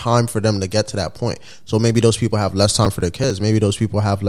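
From 2.85 to 3.30 s, after "those people have less", processor overload crackle: a run of tiny skipped buffers gives gritty tearing, not one clean dropout.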